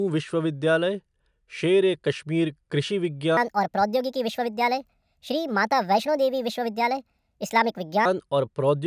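From 3.37 s to 8.05 s, just after "शेर ए कश्मीर कृषि", the speech has a wrong sample rate. It runs 1.45 times too fast and about 6.5 semitones too high. This fits 22 kHz audio played at 32 kHz without conversion. Voices sound hurried and squeaky.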